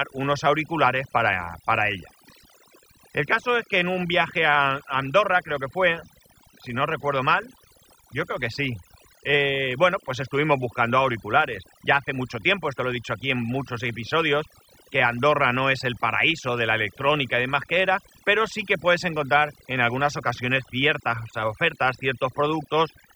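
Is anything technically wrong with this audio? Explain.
Yes. Throughout the speech clip, the recording suffers from overdone noise removal. A noise reduction stage was pushed too hard on what was originally a noisy recording. Any frequency band sitting near the tool's noise estimate gets pulled far down or muted outright, and the quieter components of the voice are removed along with the noise. The background drops and breaks up into twinkling, warbling specks.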